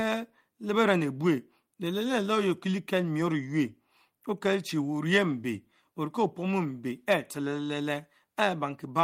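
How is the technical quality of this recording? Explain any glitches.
Nothing to flag here: no glitches turn up anywhere in this speech recording, so there's nothing to explain.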